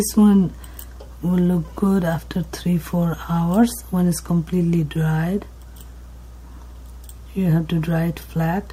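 Mains hum, a steady 60 Hz tone from power-line coupling such as a ground loop, runs throughout, roughly 20 dB below the sound. Its constant fixed pitch distinguishes it from rumble.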